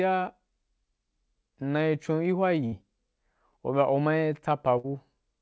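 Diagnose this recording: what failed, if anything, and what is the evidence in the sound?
At 2.66 to 2.74 s and 4.78 to 4.86 s, the speech freezes into a brief held sound that fades, then jumps ahead. This is a burst of packet loss on the network: the receiver extended and faded the last audio, losing 60 ms each time.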